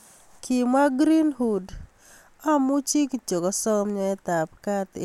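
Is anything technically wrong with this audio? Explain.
No, nothing in this speech recording stands out as a technical problem, so there's really nothing to flag here.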